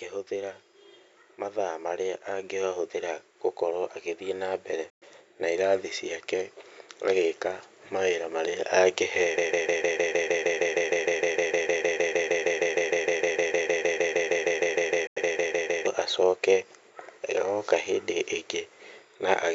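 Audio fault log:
4.90 s and 15.07 s, Bluetooth dropout: the speech cuts abruptly to silence for 116 ms, then 93 ms, and resumes further along, likely because late wireless packets were dropped.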